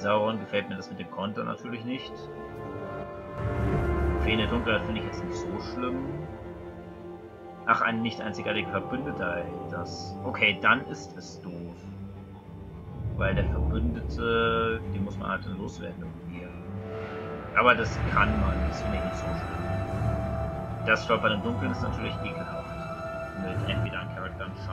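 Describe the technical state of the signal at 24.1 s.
At 24.1 s one channel drops out, from 23.86 s to the end at 24.73 s. One side of the stereo feed is likely lost, so after the mono sum the shared content falls abruptly by about 6 dB and anything carried only on that side vanishes.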